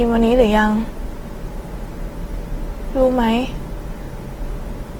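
From start to end, the speech carries plainly audible Opus compression, likely from encoding at a rate near 16 kbps in the music-style CELT mode. The band energies hold, but fine detail is rebuilt from folded lower bands or noise, so voiced sounds turn grainy and rough rather than swirly. On a spectrogram the content reaches about 20.1 kHz with few holes, yet harmonics smear into speckled, noise-like texture in the upper bands.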